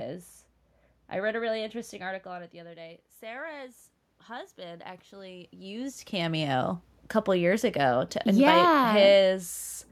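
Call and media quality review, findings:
Automatic gain rising, 2.02 to 6.42 s. Input drops about 16 dB as the talker backs off near 2.0 s. AGC slowly adds about 8 dB. Room noise swells with the voice.

Automatic gain falling, 7.3 to 9.52 s. AGC pulls gain down about 4 dB. Voice and room noise sink together.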